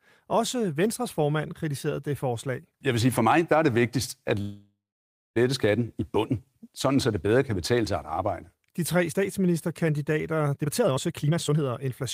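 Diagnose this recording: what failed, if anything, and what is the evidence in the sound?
Call audio freeze at the network stage, from 4.41 to 5.38 s. The sound stretches into a fading buzz, then about 0.57 s of silence. Nothing is lost. Likely delayed packets emptied the jitter buffer.

Jitter buffer speed-up from 10.57 to 12.04 s. Speech runs at 148% with unchanged pitch. Roughly 0.7 s of pitch periods are cut to shed the built-up delay.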